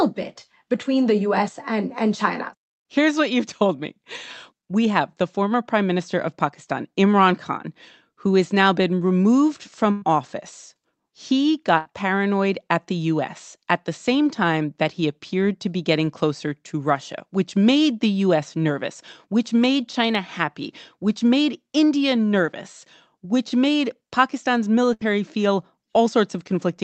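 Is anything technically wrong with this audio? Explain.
Yes, there are three bursts of packet loss in this speech: 9.91 to 10.04 s just after "has now been removed", 11.78 to 11.87 s right before "paranoid at the", and 24.93 to 25.10 s. Each time a run of packets went missing, and the receiver stretched the last bit of sound and faded it, giving a brief held buzz or dying hiss. Speech then jumps ahead with 80 to 100 ms gone.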